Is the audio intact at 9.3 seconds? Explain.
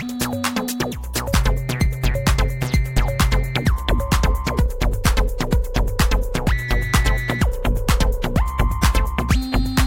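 Yes, at 9.3 seconds the audio is intact, with no dropout, click, distortion or other fault at that point.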